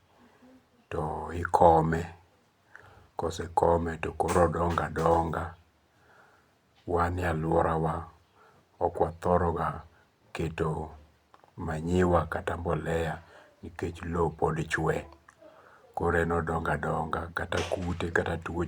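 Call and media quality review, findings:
No call or media quality findings to report for this speech recording.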